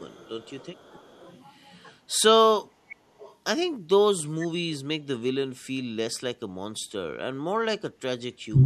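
This is a speech clip with echo-canceller faults. Echo leak is heard at 0.00–0.29 s, 0.59–0.67 s, 0.94–1.34 s and 3.19–3.33 s. A faint copy of the speech trails 445 ms behind. It sits far below the main voice, weakest around 0.6 s. The likely cause is a far-end loudspeaker echo the canceller did not fully remove. Background gated by the echo canceller shows at 2.83–2.98 s, 5.84–5.95 s and 8.03–8.15 s. The room sound briefly dips, by about 11 dB, 16 dB and 26 dB. Each time the canceller clamps the microphone while the loudspeaker plays, then releases it. Speech suppressed in double talk affects the last moments, from 8.48 s to the end. The voice drops deeply in a short cut. This is likely the canceller pulling down the talker while the other side also speaks.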